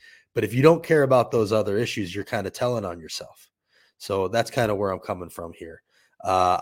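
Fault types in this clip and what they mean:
Nothing stood out on listening to the speech in this recording.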